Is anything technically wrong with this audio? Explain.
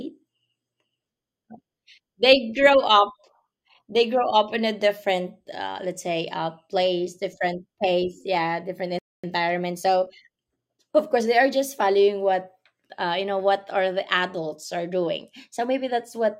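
Yes. The speech stops dead for a moment, then rushes to make up the lost time.

From 8.99 to 9.24 s there is a playback stall: the speech breaks off mid-flow and the output is silent for about 249 ms. The likely cause is that the player ran short of buffered data, or its audio thread was held up, so nothing reached the output until it recovered. On a waveform this appears as a flat line with abrupt edges, and on a spectrogram as a fully blank vertical band cutting across every frequency.

From 9.24 to 10.88 s comes time-compressed catch-up. To work off the backlog from the stall, the player drops short slices of audio and cross-fades across the joins, running the speech at 1.15 times normal speed without shifting its pitch. It sounds hurried. A spectrogram shows harmonics at their usual heights but syllables squeezed closer together, with small discontinuities where pieces were removed.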